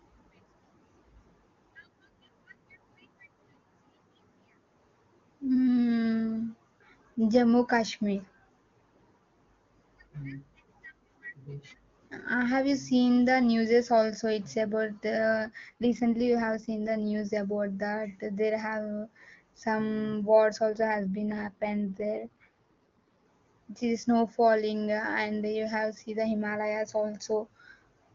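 After "it's about", from 15.18 to 17.25 s, and again from 20.73 to 23.24 s, just before "the snow falling", an AMR rate drop turns the speech rougher and more synthetic without any gap or bandwidth loss, consistent with the wideband codec stepping down from about 23.85 to 8.85 kbit/s on a weak link.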